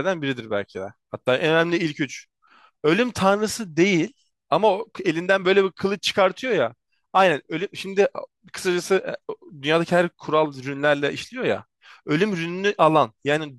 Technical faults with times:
none

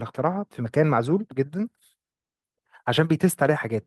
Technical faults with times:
none

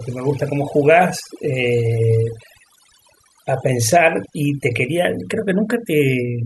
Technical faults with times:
0.00-6.46 overdone noise removal

